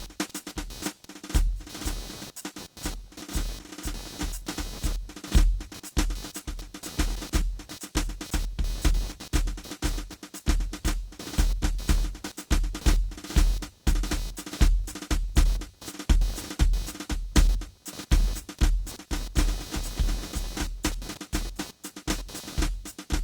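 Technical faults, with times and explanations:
Throughout, computer activity noise: a buzzy, chirping texture pulsing a few hundred times a second sits roughly 20 dB under the music, shifting with the machine's workload rather than the playing, since processor or graphics load is disturbing the shared ground of the audio circuit.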